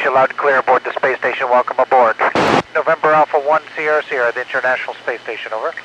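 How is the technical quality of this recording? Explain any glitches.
Nothing in the recording stood out as a glitch or technical problem on listening.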